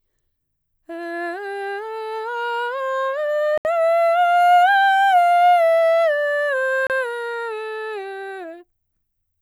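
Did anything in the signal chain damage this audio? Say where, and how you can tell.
Yes. The music cuts to dead silence from 3.58 to 3.65 s (73 ms) and from 6.87 to 6.90 s (30 ms), then resumes. The waveform shows flat gaps, and the spectrogram shows blank vertical bands. The likely cause is a Bluetooth stall: wireless packets were held up, and the headphone buffer ran dry until they arrived.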